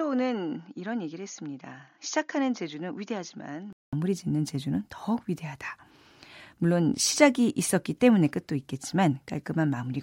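For the first 3.93 seconds this speech sounds dull and boxy, with nothing above 6.8 kHz, a level roughly 10 dB lower than what follows, and a faint noise floor of its own sitting far below the signal. At 3.93 s the sound drops out for 200 ms and then returns brighter, fuller and louder. The likely cause is an input switched to a poorer device, with the recording starting on a narrower-band device before the system changed over to a better one.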